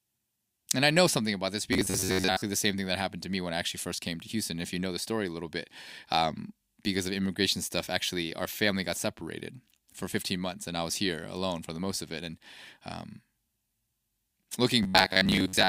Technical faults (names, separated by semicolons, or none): robotic sound from repeated short buffers